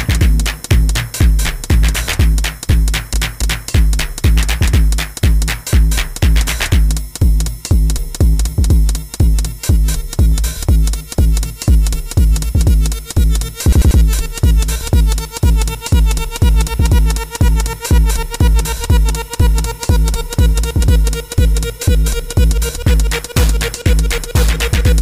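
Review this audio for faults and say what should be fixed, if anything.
Repeated frames at 3.14–3.69 s and 13.73–14.00 s: duplicated compressed frames replay a 278.6 ms block twice, then a 92.9 ms block three times, causing an audible stutter. To prevent this, make sure the encoder, muxer or transport writes each frame exactly once and discards retransmitted duplicates before decoding.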